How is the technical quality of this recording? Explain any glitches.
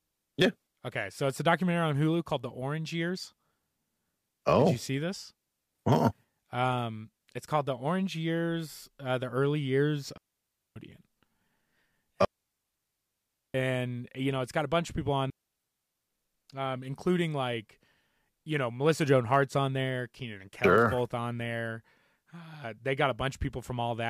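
The recording is hurt by three digital wireless dropouts in the speech. In each, the receiver lost too much data and muted with a quick fade, leaving a clean near-silent hole with no noise burst around it. The first runs 10.17 to 10.76 s, just after "uh the early years". The second, the longest at about 1.3 s, runs 12.25 to 13.54 s, ending right before "you know it's got". The third runs 15.30 to 16.08 s, between "bunch of people on" and "um including like".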